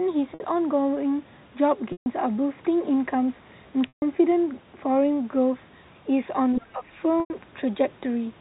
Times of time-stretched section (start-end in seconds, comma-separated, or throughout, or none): none